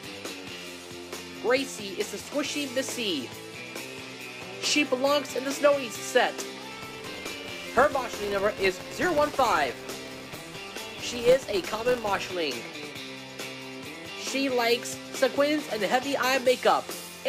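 From 6.71 s to 12.33 s, a filter restarted on every block. It drops its memory at each block edge and starts again from silence. Each restart leaves a small transient. Together they form a buzz near 172 Hz, which fits a 256-sample block, rising and falling with the sound's level.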